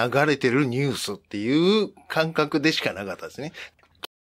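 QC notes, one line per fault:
4.05 s to end: cut-off end. The sound stops mid-event and drops straight to digital silence with no decay, because the final buffers were never written or played.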